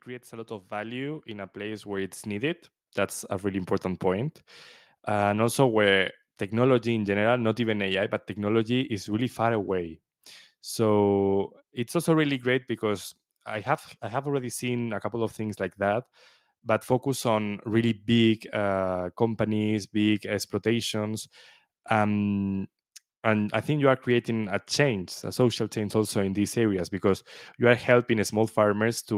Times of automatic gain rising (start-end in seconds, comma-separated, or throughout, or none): 0.05-4.43